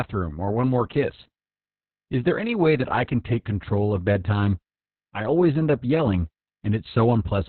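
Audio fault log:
throughout Opus voice compression: narrowband SILK coding removes everything above 4.3 kHz and coarsely codes excitation, leaving speech muffled and hoarse, which fits roughly 6 kbps.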